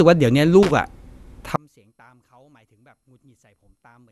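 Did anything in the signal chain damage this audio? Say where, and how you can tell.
Yes. The speech sounds swirly and hollow throughout, with nothing above 12.6 kHz; this is likely generation loss in the codec stage from several MP2 passes at around 128 kbit/s.

From 0.63 to 0.71 s there is a short, irregular burst of scratching: loose connector crackle in the analogue wiring, where a contact breaks intermittently and chops the signal.

From 1.56 s to the end, the mono sum drops by about 34 dB and the centred speech nearly vanishes, likely because one channel was inverted in the wiring.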